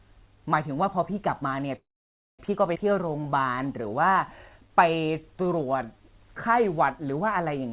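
At 1.76 s the speech stops and does not resume until 2.41 s, a gap of about 0.63 s. The last sound carries on briefly as a fading buzz or hiss, then about 570 ms of silence follows before the audio picks up exactly where it left off, with nothing lost. This is a call audio freeze, most likely packets stalling in transit so the jitter buffer ran dry and the receiver had nothing to play but a decaying continuation.

From 2.75 to 2.77 s there is a skip ahead. Playback jumps forward across a seam only a few milliseconds wide, and roughly a third of a second of speech is missing. The audio on either side is butted together almost directly. This fits the buffer discarding a stretch of backlog to recover the delay it had accumulated.

From 2.90 to 6.03 s the receiver runs a jitter buffer slow-down. It repeats single pitch periods and slivers of pause to rebuild its reserve, adding about 290 ms over the stretch. 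The speech plays at 91% of its normal rate with unchanged pitch, so sounds are drawn out. Throughout, the band stops at 4 kHz, consistent with a narrowband G.711 A-law path at 64 kbps.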